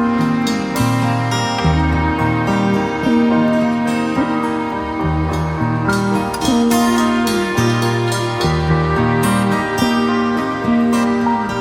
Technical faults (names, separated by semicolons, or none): none